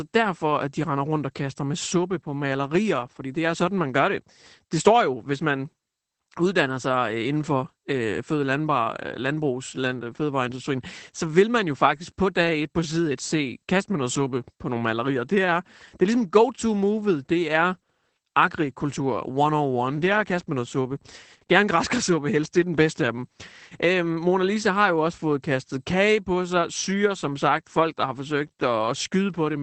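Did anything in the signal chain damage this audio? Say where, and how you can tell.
Yes. Throughout, the speech sounds muffled, hoarse and slightly robotic, with nothing above about 8.6 kHz. This is Opus voice compression at the codec stage: SILK in wideband mode, coding the excitation coarsely at what sounds like roughly 12 kbps.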